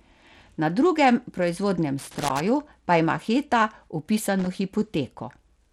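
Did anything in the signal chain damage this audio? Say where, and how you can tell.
Yes. The codec stage has left damage across the whole clip. The treble is thin and unsteady, flickering in and out. A gritty grain and aliasing sit on the speech from start to finish. This is likely Bluetooth SBC compression. SBC splits the signal into a few wide sub-bands and hands out bits without a hearing model. When bits run short, the top bands starve and the rest are coarsely quantised. The damage is plain, which fits a low setting near 96 kbps.

The analogue wiring adds a second fault, a loose connector crackle. There is an irregular burst of crackle and scratching from 1.99 to 2.40 s. A shorter burst follows from 4.39 to 4.47 s. Neither burst has a steady rhythm, which points to a physical contact rather than a digital dropout. A worn or dirty contact makes and breaks as it shifts. That chops the signal into rapid fragments, and any DC on the line turns each break into a pop.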